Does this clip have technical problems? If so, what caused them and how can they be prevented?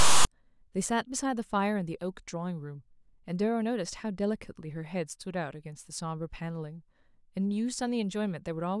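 Yes. From 0.00 to 0.27 s a harsh, off-centre rasp cuts to dead silence. These are file tags played as audio, with text tags and their zero padding read as samples. To prevent it, the decoder or converter should parse the file header correctly and skip tag blocks before it starts reading audio data.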